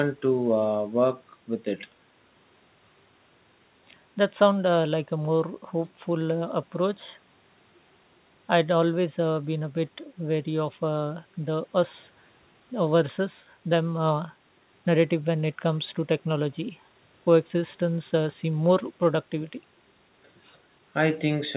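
Speech clip, no technical faults.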